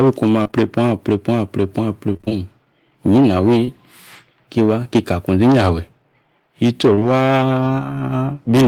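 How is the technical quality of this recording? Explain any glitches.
The recording has packet-loss glitches at four points, typical of speech sent over a network call.

Short concealed packet loss occurs at 0.43 to 0.55 s, at 3.65 to 3.69 s, and at 6.95 to 7.03 s. The first stretch is three consecutive 20 ms losses, the second a single one, and the third two in a row, which fits 20 ms packets. Each time, the receiver covered the missing audio by extending the preceding sound, its pitch if voiced or shaped noise if not, then faded back into the real signal. This is heard as a brief smear or wobble, and a short consonant may drop out.

Repeated packet loss (robotic sound) runs from 2.13 to 2.33 s. Five separate gaps fall within those 0.2 s, the longest about 23 ms, so roughly half of that stretch is synthesized fill rather than received audio. Each patch extends the previous sound, and the next loss arrives before the speech has properly resumed, giving a choppy quality with fragments missing.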